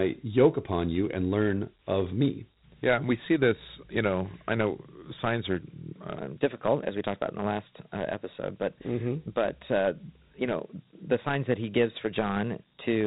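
Right from the start, the whole clip carries the sound of Dialogic VOX ADPCM. Everything above about 3.9 kHz is gone, so the speech has that narrow phone-line quality, and there's a gritty hiss that rides along with it. That comes from squeezing each sample into a 4-bit step that only tracks the change from the last one. The 32 kbps rate points to 8,000 samples a second, and the damage is plainly audible.

Then, just after "i know signs are", at 6.18 s, the rest of the clip through to the end plays as a section at the wrong speed. It runs 1.12 times too fast, so the pitch jumps up about two semitones and the delivery sounds rushed and a bit chipmunky. Speed and pitch move together here, which points to playback being likely stretched to the wrong clock rather than any pitch processing.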